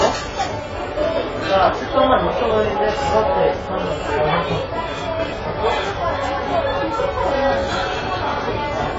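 Throughout, heavy AAC compression, likely at a very low bitrate around 16 kbps, cuts off everything above 7.6 kHz, leaving the sound dull, smeared and warbling.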